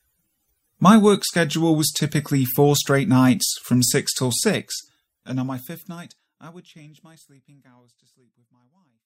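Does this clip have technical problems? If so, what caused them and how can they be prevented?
No, this speech clip has no technical problems, and the gradual fade-out over roughly its second half is a smooth, deliberate edit.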